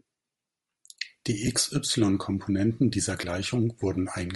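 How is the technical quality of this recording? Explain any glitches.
The technical quality is compromised, with two kinds of fault.

Throughout, the speech has a breathy, grainy edge. This is likely Bluetooth LC3 compression, with upper frequencies replaced by noise, consistent with roughly 48 kbps.

At 1.47 s and from 3.21 to 3.23 s, lost LE Audio frames cause brief glitches. The decoder refills each gap with the previous spectrum under random signs.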